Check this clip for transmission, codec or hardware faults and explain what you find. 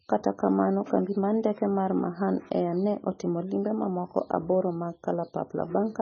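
One codec fault runs through the whole speech clip: MP3 compression, likely encoded at a very low bitrate. Nothing survives above 6.6 kHz, and on a spectrogram the energy ends at a flat, sharp ceiling there. Starved of bits, the encoder discards the treble and flickers weak frequency lines on and off between frames, so the spectrogram shows patchy, blocky holes. The heavy damage sounds dull, watery and swirling, with smeared consonant onsets, which fits a rate around 16 kbps.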